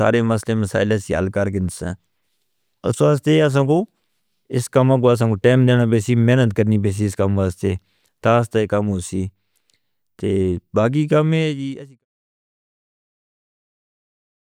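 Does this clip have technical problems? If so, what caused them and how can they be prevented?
No, nothing stood out on listening to this speech clip, and the smooth fade-out that begins around 11 s and finishes at 12.05 s is an ordinary editing choice rather than a problem.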